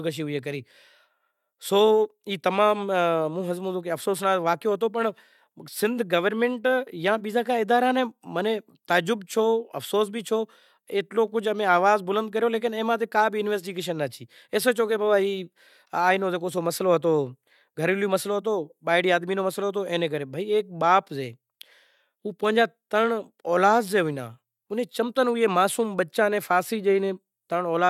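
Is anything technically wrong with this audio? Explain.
No, no technical faults here.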